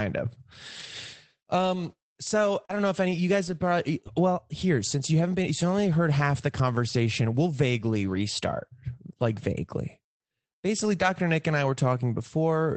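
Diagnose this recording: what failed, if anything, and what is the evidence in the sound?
Rough, grainy patches with no actual gaps appear at 0.79–0.85 s, 2.69–2.71 s just before "don't know if any", and 3.47–3.53 s between "if any you guys" and "probably well here since". This is a lost packet rebuilt from error correction, at the network stage: the decoder played the low-bitrate Opus in-band FEC copies carried in the following packets, about 40, 20 and 40 ms of audio.

A brief smear sits at 2.65–2.71 s, leading into "don't know if any". This is short concealed packet loss, again at the network stage. About 40 ms arrived too late for the decoder, which bridged roughly 35 ms by extending the preceding sound before blending back into the received audio.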